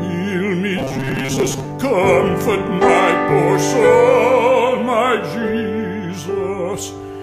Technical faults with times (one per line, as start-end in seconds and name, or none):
0.79-1.65 robotic sound from repeated short buffers